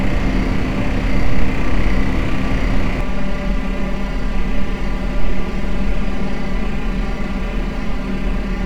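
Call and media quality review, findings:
Channel delay (comb filtering), 3.01 s to end: hollow, phasey tone. One channel lags around 5 ms before mono sum; notches spaced from near 100 Hz.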